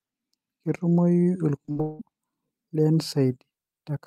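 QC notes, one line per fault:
1.65–1.69 s and 1.71–1.77 s, short concealed packet loss: two quick smeary wobbles, the second longer. About 20 ms and then 40 ms of audio missed the decoder, so the receiver stretched the preceding sound from its pitch or as shaped noise, then blended back.
1.81–2.01 s, long network dropout: an artificial continuation of the last sound that fades over roughly 0.18 s without ever falling fully silent, after which speech resumes with that stretch gone. The likely cause is packets ceasing to arrive while concealment padded the gap.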